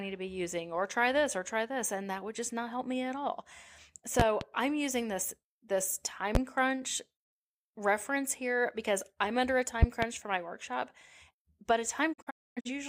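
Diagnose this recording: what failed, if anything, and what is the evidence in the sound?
Loud pops sit on top of the speech, roughly 20 to 25 dB above it: a double pop at 4.20–4.45 s just before "I'm using this this", a single one at 6.35–6.39 s, and another pair at 9.83–10.06 s between "because I'm under a" and "for my". This points to the analogue wiring, likely voltage steps from a plug, switch or static discharge.

A digital broadcast dropout starts at 12.12 s after "but a". The receiver mutes with 20 ms fades, leaving several holes totalling about 384 ms across 12.12–12.70 s, the longest 256 ms. This fits about nine frames lost or failing their checksum. The audio in those gaps is gone.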